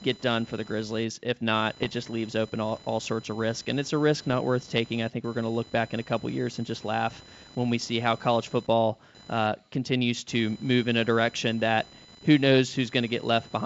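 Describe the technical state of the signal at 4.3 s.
Bit errors on an ADPCM link occur from 4.27 to 4.34 s, between "it's a risk" and "worth taking I think". The wideband telephone coding here is G.722, and its clean lower band fits the full 64 kbit/s mode. Flipped bits in that stream do more than spoil a single sample. Each error throws off the decoder's step size and predictor, so the damage carries on for several milliseconds as it recovers. Over these 70 ms the result is pops and a rough, gritty burst with brief jumps in level. The spread of the damage points to a handful of corrupted frames and a low error rate, well under one percent.

Computer activity noise also runs under this moment, as it does through the whole clip. It is a buzzy whine, roughly 25 dB below the speech, pulsing at around 1 kHz. Load changes in the machine are shifting the ground shared with the audio circuit, so the buzz follows the computer's activity, not the speech.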